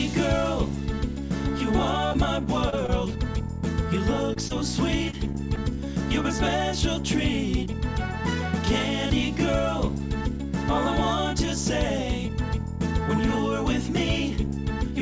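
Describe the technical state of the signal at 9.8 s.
At 9.8 s the signal is intact, with no dropout, distortion or glitch, only the steady top-end limit around 8 kHz that comes from the call codec path, which fits a wideband codec such as G.722.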